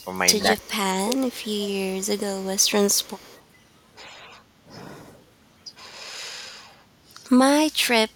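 An echo leak is the likely cause of the faint repeats at 0.00 to 0.08 s, 0.59 to 0.68 s, 1.26 to 2.71 s and 2.89 to 3.42 s: a far-end loudspeaker's output reached its microphone and the echo canceller let part of it return. Each time, a delayed copy of the speech trails the original by 121 ms, sitting about 30 dB below it, brief in the first two spots and sustained through the longer stretch from 1.26 s.

From 0.61 to 1.24 s, overlapping the second echo scrap, the talker's speech is pulled down in pieces, most likely speech suppressed in double talk: with both sides active, the canceller could not tell the near talker from the loudspeaker echo and attenuated everything. The dips reach about 20 dB and add up to roughly half a second.

At 6.77 to 6.94 s the background is gated by the echo canceller: it clamped the microphone while the loudspeaker played, and the room sound drops by about 9 dB for around 150 ms before springing back once the canceller releases.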